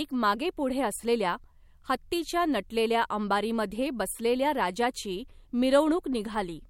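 Nothing goes wrong anywhere in this bit of speech, so there's no technical fault to point to at any moment.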